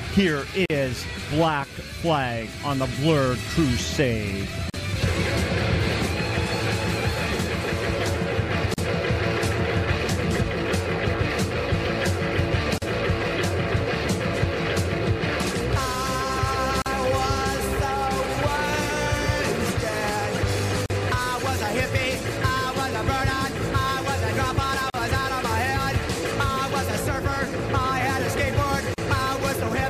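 Gaps at a join of encoded pieces drop out at 0.66, 4.70, 8.74, 12.78, 16.82, 20.86, 24.90 and 28.94 s, every 4 s. Each is a gap of about 40 ms, its edges smeared so the silent part is shorter. Separately encoded pieces were joined with their start delay and end padding left in.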